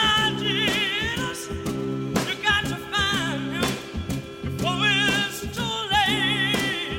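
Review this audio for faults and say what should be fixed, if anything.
Nothing stood out on listening, so there is nothing here that needs fixing.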